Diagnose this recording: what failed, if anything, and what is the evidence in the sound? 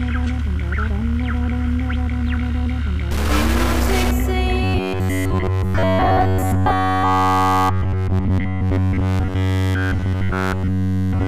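From 3.11 to 4.11 s the sound turns distorted, and the quiet gaps fill with hiss. A stuck bit at the converter or data line is the likely cause: about half the samples shift by that bit's weight, leaving stepped offsets in the waveform and broadband hash across the spectrogram.

From 4.64 s to the end, the audio becomes a rigid, metallic 93.8 Hz buzz. This is robotic sound from repeated short buffers, likely a driver or buffer underrun. A roughly 10.7 ms block repeats throughout, so the waveform shows identical cycles and the spectrogram shows harmonics spaced 93.8 Hz apart.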